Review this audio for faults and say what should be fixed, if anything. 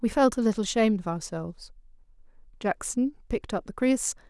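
Nothing stood out on listening to this speech recording, so there is nothing that needs fixing.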